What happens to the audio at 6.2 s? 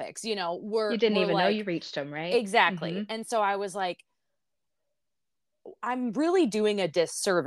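Nothing goes wrong at 6.2 s; the speech carries on intact through that moment.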